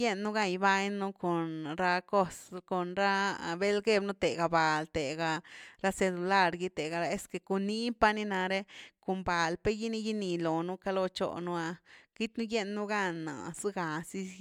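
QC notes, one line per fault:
No faults heard anywhere in this speech recording.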